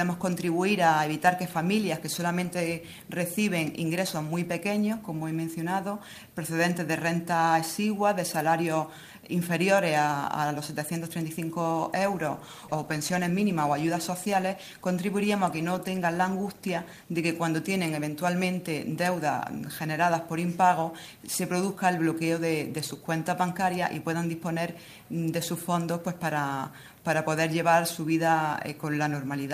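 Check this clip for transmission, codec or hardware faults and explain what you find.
One fault: a call bitrate drop between 11.72 and 17.31 s. The sound turns coarse for about 5.5 s. The encoder was throttled after the bandwidth estimate fell, which fits a cut from about 32 to 17 kbps.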